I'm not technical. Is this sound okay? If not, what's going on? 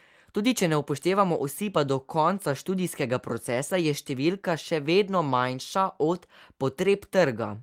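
Yes, the recording holds up technically, with no audible glitches, dropouts or other faults anywhere in it.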